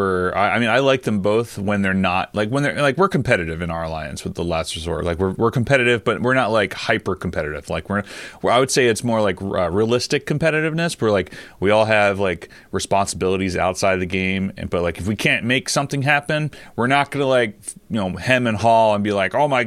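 Nothing in this recording stands out as a technical fault, so there's no problem to point to at any moment along the way.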